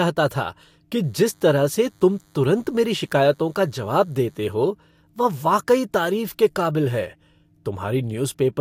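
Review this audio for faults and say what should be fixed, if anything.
A thin, steady buzz at 100 Hz, rich in harmonics and sitting low beneath the speech, runs from 1.04 to 4.55 s. This is DECT cordless phone buzz: a nearby handset or base fires a radio burst every 10 ms, which the audio circuitry rectifies into audible tone. Keeping DECT phones and base stations well away from microphones, cables and interfaces, or using shielded cabling, prevents it.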